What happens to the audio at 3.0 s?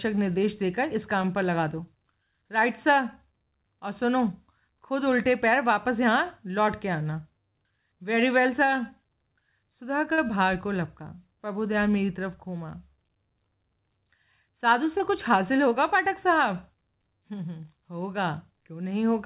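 At 3.0 s the speech carries on intact, with nothing breaking into it, and it sounds like an ordinary call line whose content stops at about 4 kHz, which fits a narrowband G.711 connection.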